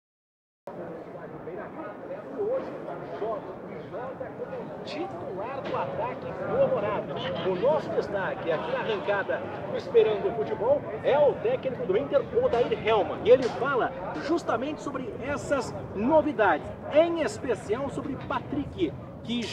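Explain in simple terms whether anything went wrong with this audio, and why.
A cut-off start: the recording began late, so after silence until 0.67 s the sound jumps in already underway, with no natural build-up.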